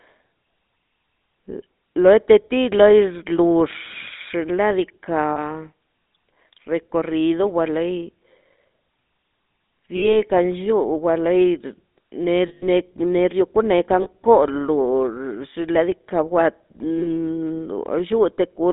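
GSM full-rate codec damage runs through the whole speech recording: a buzzy, gravelly roughness from coarse pulse-driven vocal-tract modelling, confined to roughly 200 Hz to 3.7 kHz, consistent with a 13 kbps full-rate coder. Lost GSM frames appear at 5.30, 9.96, 12.48, 14.02 and 16.98 s, spanning about 60, 60, 140, 40 and 40 ms. The decoder held the last good frame, producing a brief rough, metallic ring, longest at 12.48 s.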